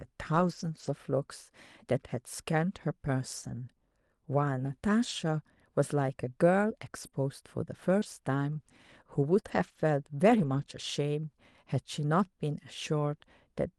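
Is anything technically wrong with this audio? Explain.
Yes. Between about 0.35 and 10.64 s the speech has scattered short gaps, roughly three of them, the longest around 40 ms. About 80 ms of audio went missing in total. The receiver covered each hole by extending the preceding sound, so listeners hear brief ticks, smears or hiccups rather than silence. Unlike one long dropout, these hiccups are isolated and tiny, touching only about one percent of that stretch, and the speech stays clear around them.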